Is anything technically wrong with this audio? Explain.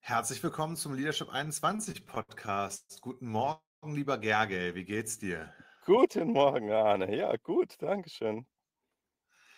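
Yes, there are three faults, all from the receiving side of a call.

From 1.69 s to 2.92 s there are repeated stalls (stutter). Packets kept arriving late, so the jitter buffer ran dry 13 times in that stretch. Each time, the receiver stretched the last sound to cover the wait, fading it in the longer waits, up to 139 ms. About 359 ms was filled this way, 29% of that span, with nothing lost. The speech drags and catches in a halting, stuttering rhythm.

From 3.52 s to 3.85 s there is a call audio freeze. The cause is likely a hold-up in packet delivery that left the jitter buffer empty. The receiver carried the last sound forward briefly, then let it fade, and about 210 ms of the 305 ms gap is silent. The speech then resumes exactly where it stopped, now running about 305 ms later. The result is an abrupt pause with a short tail rather than missing speech.

From 6.98 s to 8.97 s there is a jitter buffer speed-up. 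The buffer had built up more audio than it targets, so the receiver trimmed many small pitch-period slices in succession to catch up, removing roughly 150 ms in total. The speech runs at 108% of its normal rate with unchanged pitch, so that stretch sounds slightly hurried.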